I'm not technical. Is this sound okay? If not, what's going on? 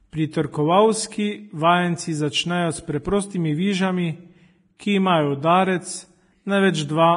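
No. Vorbis compression, throughout the clip: the speech sounds hissy and grainy, and nothing above about 10.6 kHz remains, so the crisp edges of consonants are dulled. The likely cause is saving the recording in a heavily squeezed format. To make the file small, the encoder keeps a rough outline of the sound and describes the fine treble detail so crudely that it turns into a rough, noisy wash.

Pre-echo, from 4.77 to 4.80 s: a short hiss creeps in just before a sudden sound, about 29 ms early, and the sound itself lands softer and smeared. The encoder handles the audio in short chunks and spreads its errors evenly across each chunk. Here the sharp sound came late in a chunk, so the noise meant to hide under that loud moment spilled into the quiet just before it.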